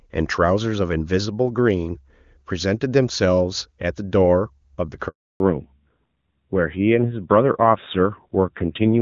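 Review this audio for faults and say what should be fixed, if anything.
A handover gap runs from 5.08 to 5.40 s. The speech dies away within a few tens of milliseconds and leaves 320 ms of silence while the call moves between networks and no speech frames arrive. Whatever was said in that window is gone. A codec dropout or packet-loss concealment would leave buzzy, smeared or repeated sound. This is a clean hole that starts with a quick fade, and the audio changes character when it comes back. Handover tuning should let the new link establish before the old one is released, so frames keep flowing through the switch.

Fallback to narrowband follows directly from 5.40 s to the end of the clip. Up to that point the speech has the clear, wideband sound of AMR wideband (HD Voice), which fits a high rate near 23.85 kbit/s. After the gap nothing remains above 4 kHz, and the speech turns duller and rougher. 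That points to a low-rate narrowband codec around 7.4 kbit/s. A simple low-pass filter would only muffle the sound. Here the added grittiness marks a codec switch, and the sudden change at the handover rules out gradual bandwidth loss. Both network legs should be configured to negotiate AMR-WB, so the call keeps HD Voice after a handover.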